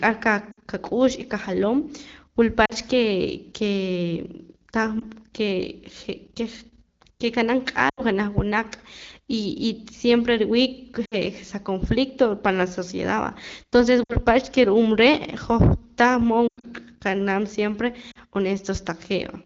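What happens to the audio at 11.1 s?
The speech briefly drops to near silence from 11.05 to 11.15 s, lost AMR speech frames: about 60 ms, consistent with three dropped 20 ms frames, concealed with decaying repeated parameters.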